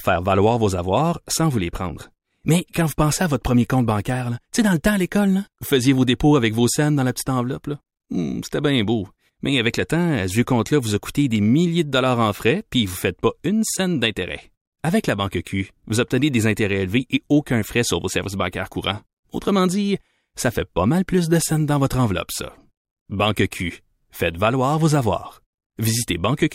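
No technical faults can be heard anywhere in this speech recording; the signal stays steady and intact throughout.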